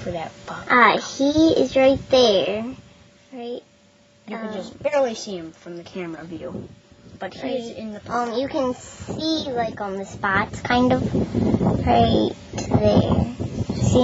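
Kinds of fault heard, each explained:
Nothing here counts as a fault, so there's nothing to list.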